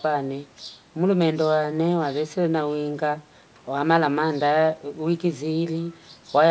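No technical faults can be heard in this speech.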